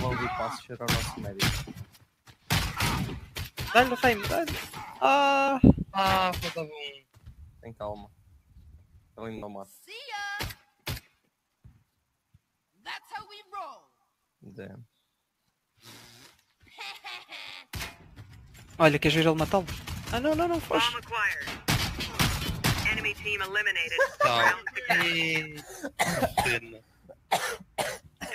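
Throughout the clip the level breathes and pumps by a few decibels. Held parts and decaying tails sink while attacks push through. A noise suppressor designed for speech was left running and treats steady tone and ambience as noise to remove.

From 1.69 to 2.5 s, 3.25 to 3.58 s, 6.98 to 7.65 s and 8.05 to 9.17 s, the sound is cut by the noise suppressor. Sustained material ducks by up to about 12 dB, and decays are clipped short.

At 2.79 to 2.81 s (15 ms), 9.37 to 9.43 s (52.5 ms) and 21.44 to 21.47 s (30 ms), tonal content briefly turns into a hissy smear. These are lost LE Audio frames. The LC3 decoder repeats the last spectrum with scrambled phase. The longest gap fits about seven 7.5 ms frames.

Near the end, at 26.78 to 27.31 s, 27.62 to 27.78 s and 28.0 to 28.22 s, the suppressor cuts in again, pulling held sound down by about 11 to 12 dB.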